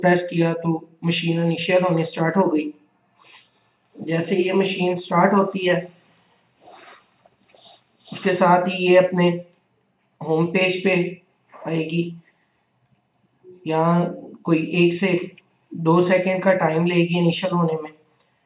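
Nothing technically wrong turns up anywhere in this audio, so there's no problem to pin to a time or trace to a cause.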